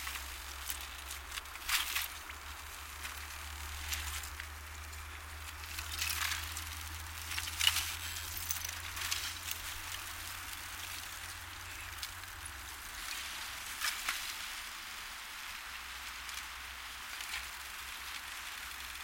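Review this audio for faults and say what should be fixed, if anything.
No faults heard; nothing needs fixing.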